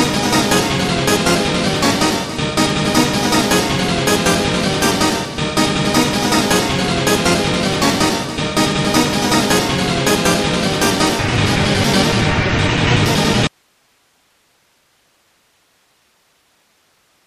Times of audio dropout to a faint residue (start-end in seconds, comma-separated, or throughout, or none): 13.47-17.26